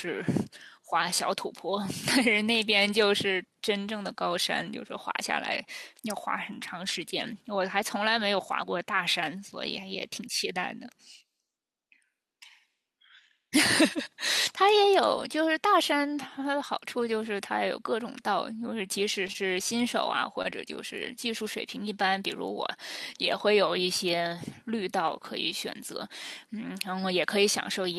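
Between 19.27 and 19.57 s there is repeated packet loss with a robotic sound. Four gaps, the longest 22 ms, were patched by extending the preceding sound, so about a fifth of that stretch is synthetic fill and 20 ms is simply gone. It sounds choppy and robotic. A spectrogram shows repeated smeared patches where harmonics freeze into flat bands, and the waveform shows short, suspiciously regular repeats.

At 20.42 to 20.46 s comes a short stall from a late packet. The jitter buffer ran dry, and the receiver held the last sound for 22 ms until the packet arrived, then resumed at the same point with nothing lost. It is heard as a briefly over-held sound with a faint buzz or dip. On a spectrogram it appears as a thin stretched column, and the waveform shows a small cyclic repeat.

At 20.50 to 20.54 s a short concealed packet loss follows. About 20 ms never arrived in time, and 12 ms of fill continuing the prior sound bridged the hole before blending back. 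It comes across as a quick smear or wobble. A spectrogram shows a narrow blurred slice, and the waveform shows a short altered stretch that blends back into the real audio.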